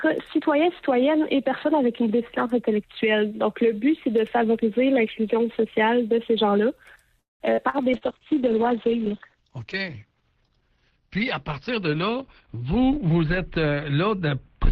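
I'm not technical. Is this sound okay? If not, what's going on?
No. Around 7.19 to 7.51 s, the call audio froze, likely because packets were held up in the network and the receiver's buffer ran dry. The receiver stretched the last sound into a fading buzz, then silence, and the sound resumed late, with nothing lost.

Just after that, short concealed packet loss hits three times: 7.53 to 7.60 s, 7.69 to 7.76 s, and 7.97 to 8.04 s. Each time, about 40 ms of audio never arrived. The receiver patched the hole by extending the previous sound, which you hear as a brief smear or wobble.

From 7.95 s to the end, there's a call bitrate drop. The connection seemed to weaken, so the sender squeezed the audio into far less data. Everything above about 6 kHz is cut, making the sound duller, rougher and watery.

From 11.71 to 13.66 s, a jitter buffer speed-up occurs. Too much audio had piled up waiting, so the receiver snipped out tiny slices, roughly a seventh of a second in total. 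The sound plays about 7% faster at the same pitch and feels hurried.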